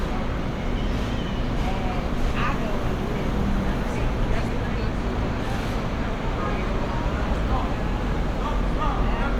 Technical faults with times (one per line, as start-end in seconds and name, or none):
4.25 corrupt frame decoded
8.15 corrupt frame decoded